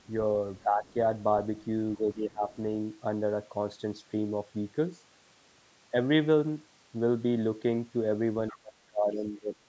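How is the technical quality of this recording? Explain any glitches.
The recording has two recurring call-path glitches, both tied to moments when the far end seems to be talking at the same time. The audio also carries the band limit of call microphone processing, with nothing above 8 kHz, which fits a 16 kHz wideband call.

Speech suppressed in double talk appears at 0.63 to 0.95 s, 1.97 to 2.47 s, and from 8.51 s to the end. The level drops by about 10 dB, then about 15 dB, then about 25 dB in the final second. The likely cause is an echo canceller that can't separate the near talker from loudspeaker echo and turns everything down.

The other side's voice leaks through at 0.87 to 0.93 s and 8.48 to 8.57 s. A faint second voice can be heard underneath, very low at the first spot (about 35 dB below the main speech) and clearer at the second (about 25 dB below). Each leak coincides with a suppression. 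It sounds like a separate voice rather than a smeared copy of the main one, which distinguishes it from room reverberation.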